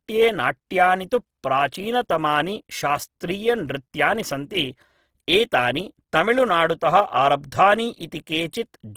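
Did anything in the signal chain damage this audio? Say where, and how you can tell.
Yes, at the codec stage: speech is grainy and rough throughout, likely Opus compression near 16 kbps; a spectrogram shows noise-filled bands, not holes.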